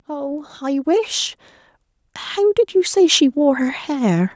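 Automatic gain rising, from 0.05 to 1.39 s and again from 2.34 to 4.31 s: the gain control judged the speech too quiet and turned itself up gradually, by about 6 dB and then about 7 dB, so voice and background swell together rather than staying level.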